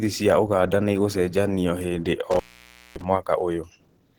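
From the start, the speech sounds muffled, hoarse and grainy. That points to Opus compression, likely in hybrid mode at a low bitrate around 16 kbps.

From 2.31 to 3.04 s, an intermittent contact briefly opens the line. The sound drops out for about 0.56 s, with crackle at each edge and faint hiss between.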